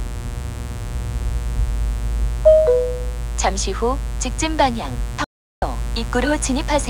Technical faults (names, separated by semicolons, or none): mains buzz; audio dropout to silence